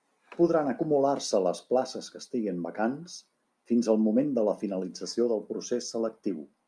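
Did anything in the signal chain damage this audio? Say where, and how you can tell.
No, nothing along the chain seems to have harmed this speech recording, and there's nothing here to point to at any stage.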